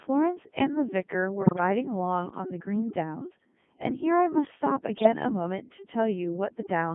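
Throughout, the speech sounds robotic and buzzy within 150 Hz to 3.4 kHz. The Codec 2 vocoder resynthesises it from pitch and spectral parameters, which fits a 3.2 kbit/s mode. From 1.41 to 1.60 s and 4.98 to 5.08 s, it lurches into warbling gibberish with sudden pitch and level jumps. These are bit errors on digital voice radio, with a few percent of bits flipped.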